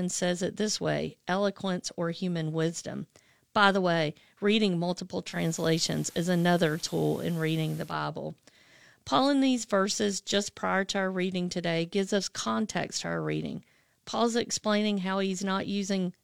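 Just after "the way reading multiple", at 5.27 s, a hiss rises underneath the speech, roughly 25 dB down, and the level shifts by about 2 dB. At 7.97 s it clears again. This is digital radio blending to analogue: the receiver lost its digital stream and cross-faded over about 163 ms to the station's FM broadcast, then returned to digital.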